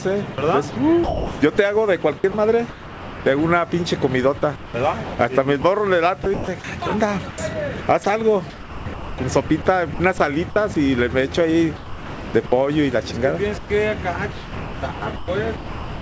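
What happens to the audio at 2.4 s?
At 2.4 s the audio falls inside a stretch of sound chopped by the voice detector, running from 0.34 to 3.26 s. The sound cuts in and out. The likely cause is a sender's detector toggling transmission, with about 1.2 s replaced by comfort noise.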